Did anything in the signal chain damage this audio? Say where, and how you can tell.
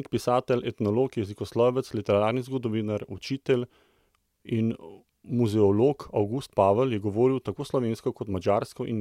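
No, nothing in the signal chain stood out as damaging this speech recording when I listened to it.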